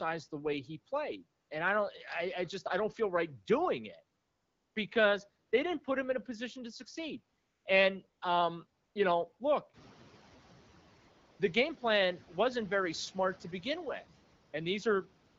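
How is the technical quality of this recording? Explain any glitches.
The recording has two kinds of audible fault: repeated AMR comfort noise filling the pauses, and a brief moment where the noise suppressor is catching up after the background gets louder. The speech itself carries the light coding texture of the AMR wideband (HD Voice) codec, at what sounds like a rate around 12.65 kbit/s.

AMR comfort noise appears ten times between 1.41 s and the end of the clip. The gaps range from 20 ms to 560 ms. The longest runs from 4.19 to 4.75 s, between "feel right doing it" and "because they didn't put". Another follows "a position to succeed" at 7.39 to 7.65 s, and a 400 ms stretch sits at 10.99 to 11.39 s. In each pause the phone stopped sending speech frames, and the receiver generated a smooth, even hiss from a rough description of the background. What sets this apart from a dropout is that the pause is never true silence. 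The real room sound is swapped for a flatter, more uniform noise that switches in and out at the gap edges.

The noise suppressor catching up happens at 9.73 to 10.0 s, just after "know look". Around 9.5 s the room noise jumps by about 13 dB. The suppressor's estimate of the background trails that jump, so for about 270 ms the louder noise passes through with little reduction, then drops by about 5 dB as the estimate adapts. Unlike a gain change or a comfort-noise switch, only the background eases down. The speech level stays the same.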